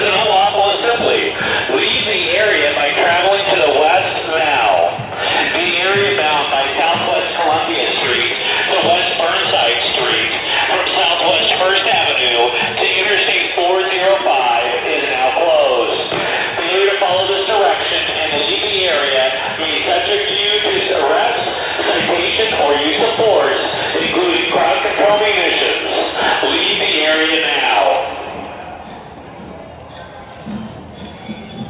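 Nothing is technically wrong with this clip.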